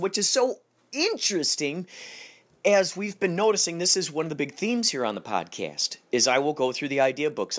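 Throughout, a resampler restarted on every block errs at each 20 ms block edge, giving a 50 Hz buzz during speech and evenly spaced vertical spectrogram lines.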